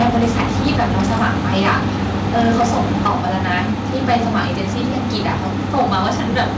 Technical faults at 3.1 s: microphone overload; microphone volume stepped down

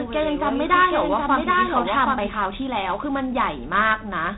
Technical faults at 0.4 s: 4-bit ADPCM compression; doubled audio track

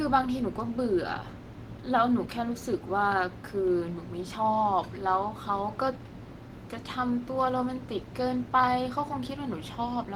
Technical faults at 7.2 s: none

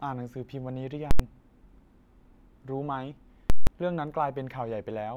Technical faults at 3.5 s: invalid numbers at full scale

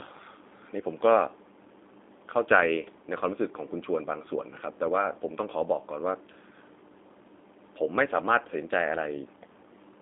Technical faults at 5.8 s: G.729 codec

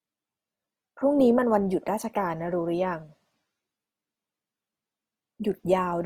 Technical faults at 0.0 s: Opus compression

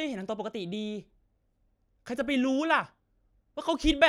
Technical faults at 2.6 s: none

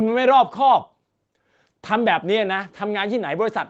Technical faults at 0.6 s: none

